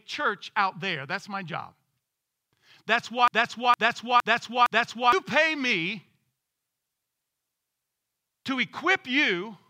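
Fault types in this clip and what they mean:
Broken-record loop: The player, encoder or stream likely stalled and kept resending the last fragment it still held, so a 0.46 s piece of the speech plays four times back to back, identical each time, from 3.28 s to 5.13 s, just before "pay me". The speech that belonged in those 1.85 s is gone: the repeats fill the gap, then the clip carries on.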